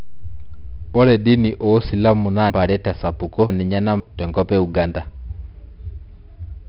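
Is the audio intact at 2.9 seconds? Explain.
No. At 2.9 seconds the audio falls inside a stretch of chunks out of order, running from 2.50 to 4.00 s, between "dini oosilamu naa" and "tenkop e". A 500 ms block of the speech was placed two chunks late, so it plays after material that should follow it. Nothing is missing, but the sequence is scrambled, making the moment sound jumbled, with three hard joins. On a waveform those joins appear as abrupt level and shape discontinuities at 0.5 s boundaries. On a spectrogram they show as vertical seams where formant tracks break off and restart somewhere else.

The moment is also affected by 4-bit ADPCM compression, which is present throughout the clip. Each sample is coded as a coarse 4-bit step from a predicted value, so the error comes out as broadband noise that rises and falls with the signal. It is heard as gritty hiss on the louder speech and as distortion on sharp onsets where the step size lags. 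The damage here is heavy. Nothing is present above 5.3 kHz, which fits a bitrate around 44 kbps. On a spectrogram that shows as a hard ceiling with a noise haze under every loud syllable.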